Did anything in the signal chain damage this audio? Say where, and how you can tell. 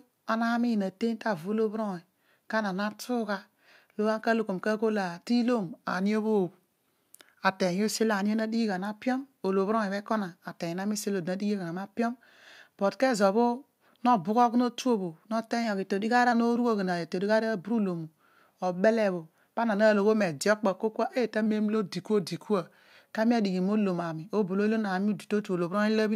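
Yes. Three drift correction steps: the speech drops about a semitone (roughly 109 cents, 6% slower) from 5.64 to 7.94 s and again from 21.46 to 23.15 s, and rises about a semitone (6% faster) from 15.64 to 16.32 s, each snapping back abruptly. The likely cause is clock-matching resampling in the driver or buffer stage, stepping the playback rate to drain or refill its buffer. On a spectrogram the harmonic stack jumps down or up as a block and returns at the boundaries.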